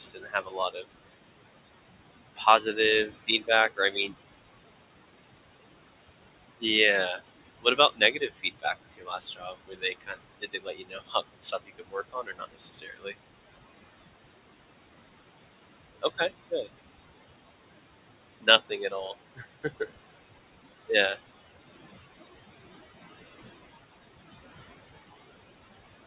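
Noise suppressor artifacts run through the whole clip. The background is pulled down by about 20 dB between phrases, then swells under the voice.

Speech cut by the noise suppressor occurs at 0.0–0.85 s, 2.36–2.77 s, 3.08–4.14 s, 7.62–13.15 s, 16.02–16.68 s and 18.41–19.9 s. The suppressor mistakes quiet speech for noise. Soft sounds drop by about 15 to 21 dB and sound swallowed. The longest stretch, at 7.62–13.15 s, loses around three seconds in total.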